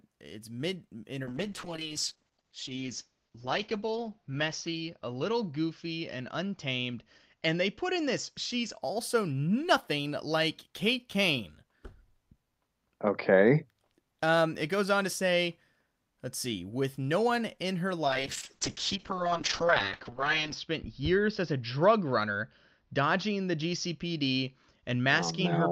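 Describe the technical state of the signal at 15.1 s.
At 15.1 s the speech signal is intact, with no audible technical fault at that moment.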